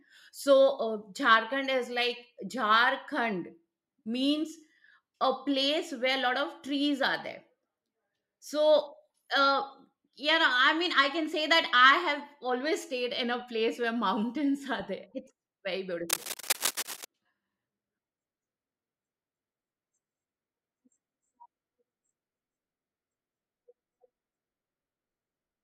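From 16.09 to 17.05 s, dense scratching and rustling bursts sit over the speech at a fairly strong level, likely cable scratch noise from a worn connector being moved.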